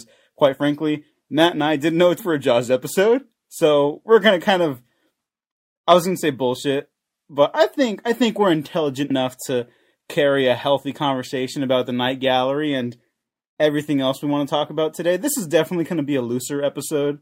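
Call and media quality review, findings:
Compressed frames skipped at 2.19 s and 9.10 s. Decoder drops whole 32 ms frames: audio jumps ahead roughly 300 ms, then roughly 150 ms.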